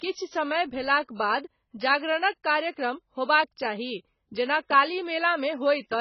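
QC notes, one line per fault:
Throughout: AAC compression, likely AAC-LC at a very low rate, which fits a 16 kbps encode. Nothing survives above 6 kHz, so the speech sounds dull. Heavy, coarse quantisation of each frame's spectrum smears it and leaves a warbling, fizzy texture on sibilants.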